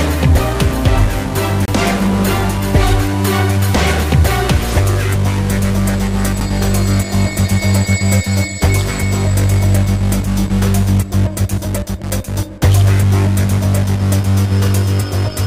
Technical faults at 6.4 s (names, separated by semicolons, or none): CD skip